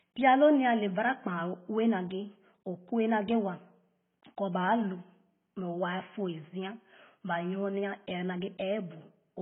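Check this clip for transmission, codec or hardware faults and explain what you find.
One codec fault runs through the whole clip. The speech has nothing above 3.8 kHz, with the first encoding's artefacts still present throughout. This is likely low-bitrate audio saved at a high bitrate: the first encoding discarded the highs and detail, and the larger MP3 re-encode preserved that damage. The carried-over artefacts distinguish it from a simple low-pass filter.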